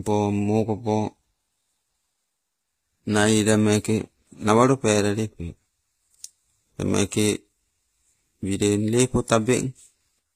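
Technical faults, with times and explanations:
Throughout, HE-AAC compression: likely a low-bitrate coder, around 24 kbps, rebuilding treble from copied lower bands; sibilants turn gritty and metallic, nothing above 15.5 kHz.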